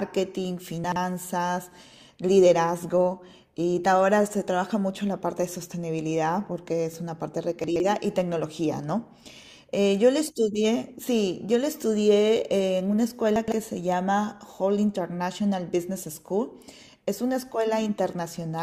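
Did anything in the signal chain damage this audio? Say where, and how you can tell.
Yes, the speech gets scrambled three times, at 0.84 to 0.96 s, 7.64 to 7.8 s and 13.36 to 13.52 s, each a brief jumbled blip. That's chunks out of order at the buffer or network stage: a 40 ms chunk turns up two or three chunks late and gets played after the ones that should follow it.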